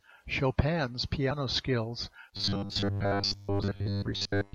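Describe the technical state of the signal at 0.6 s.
At 0.6 s the speech signal is intact, with no dropout, clipping, distortion or other fault audible at that moment.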